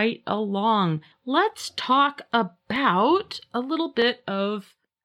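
A clock mismatch between two devices, likely a drift of a few hundred parts per million, lets the buffer between them creep until a small block of around fifteen samples is dropped or repeated. These clock drift buffer slips recur every 1.26 s, from 0.24 s to 4.02 s, about four in all. Each slip breaks the speech waveform briefly, and it is heard as a short, regular click or tick.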